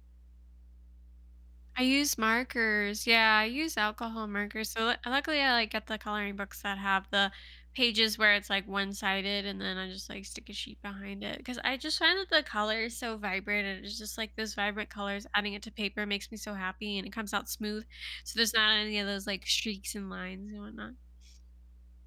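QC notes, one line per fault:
Throughout: mains hum. A ground loop or nearby transformer is letting the 60 Hz power line leak into the signal path, so a steady low tone at 60 Hz with some low harmonics sits under the speech, about 25 dB below it, constant through pauses.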